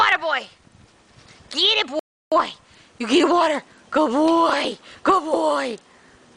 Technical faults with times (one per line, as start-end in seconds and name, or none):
1.99-2.32 rebuffering stall